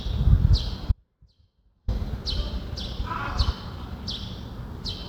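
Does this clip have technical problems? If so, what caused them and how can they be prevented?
Yes, there's an audio dropout to a faint residue from 0.92 to 1.88 s: the sound cuts abruptly, leaving only a faint leak roughly 35 dB down for nearly a second. It's likely a momentary break upstream while the path stayed live. Securing connections and watching the input feed should prevent it.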